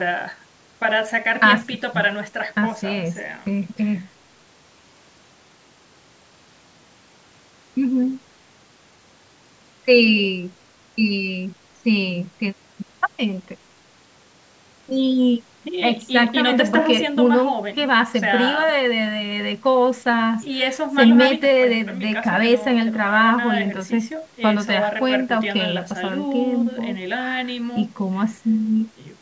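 Nothing goes wrong anywhere in this speech, which simply carries the usual character of call microphone processing, with the lowest bass trimmed away and nothing present above 8 kHz.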